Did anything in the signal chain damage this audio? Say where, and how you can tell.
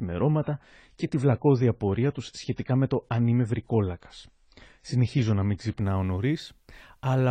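Yes. At playback, this is an adaptive stream starting at a low bitrate. The player opened on a lean encoding, then switched up. Until 5.81 s nothing sits above 9.8 kHz and artefacts are strong, which fits 24 kbit/s AAC. The speech then brightens abruptly, gaplessly.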